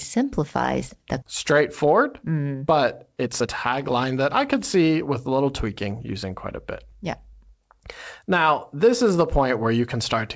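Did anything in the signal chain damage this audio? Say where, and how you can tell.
Yes. At the network and jitter-buffer stage there is a skip ahead at 1.22 s: about a second of speech is missing, and the two sides butt together with no silent gap. That distinguishes it from a dropout or concealed packet loss, which would leave silence or smeared filler. The audio was dropped either in transit or by the buffer discarding queued audio when it overflowed.

The same jitter buffer then applied a speed-up from 1.52 to 2.72 s at 107% and from 3.12 to 7.78 s at 108%, trimming roughly a tenth of a second and then about 0.4 s by cutting out pitch-period-sized pieces. The speech sounds hurried, but the pitch stays put, which rules out a sample-rate mismatch. The G.722 call codec at 64 kbps explains why nothing is present above 8 kHz.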